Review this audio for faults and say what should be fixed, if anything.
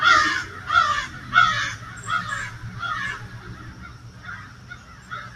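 A noise suppressor applied to music or sounds, built for speech, runs throughout and treats sustained tones and ambience as noise, so held sound pumps and thins by around 10 dB while attacks pass. Prevent it by bypassing speech noise suppression whenever the source is not speech.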